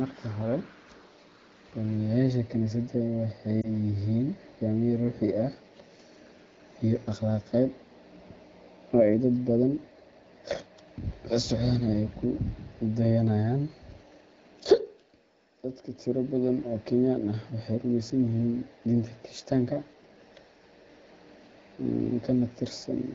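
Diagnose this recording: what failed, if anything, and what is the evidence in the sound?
Between 3.61 and 3.69 s the speech briefly dips or warbles, a short smeared moment where the sound loses definition and then recovers, a little weak or rough at first. These are lost AMR speech frames, occurring at the network stage as the radio link delivered the data. A frame corrupted in transit failed its checksum. The AMR wideband (HD Voice) decoder bridged the gap by repeating the last good pitch and vocal tract settings at reduced gain. The disturbance is brief, which fits a single lost 20 ms frame.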